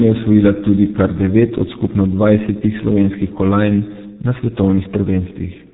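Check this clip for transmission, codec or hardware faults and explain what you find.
One fault runs through the whole speech clip: G.723.1 codec damage, and it is heavy. The band stops at about 3.8 kHz, so sibilants and fricatives lose their energy and the voice sounds muffled. The codec rebuilds speech from a coarse vocal-tract model that is refreshed only once per 30 ms frame. Transitions between sounds therefore smear, consonants blur, and the voicing takes on a hoarse, buzzy roughness. The sound fits the 6.3 kbit/s mode.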